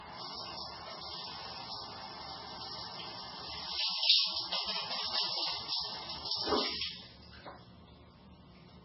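An everyday-sound recording, likely squeezed through heavy MP3 compression, at a rate that fits a very low 16 kbps. Starved of bits, the encoder removed everything above 5.6 kHz and kept dropping weak frequency lines between frames, leaving the sound dull, watery and swirling throughout.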